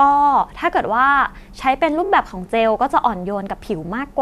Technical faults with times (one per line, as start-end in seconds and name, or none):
2.05-2.09 repeated frames
3.86-3.88 repeated frames